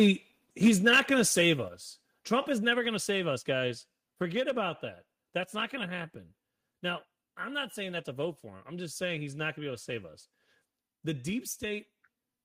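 Microphone overload at 0.00 to 0.11 s and again from 0.65 to 1.49 s: the speech peaks are flattened, giving a harsh, crackly edge to the loudest syllables. The likely cause is input gain set too high, driving peaks about 2 dB and then about 4 dB past the converter's ceiling, so a few percent of samples are clipped.

Microphone volume stepped down at 0.68 s, 1.68 s and 2.73 s, just before "going to save us": speech and background drop abruptly by about 2 dB, about 5 dB and about 3 dB, likely because the call software reacted to the distorted peaks by cutting the device's input gain in single steps.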